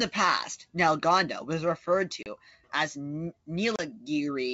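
Packet loss on an ADPCM call drops short silent holes at 2.23 and 3.76 s, and the out-of-step decoder brings the speech back slightly distorted briefly.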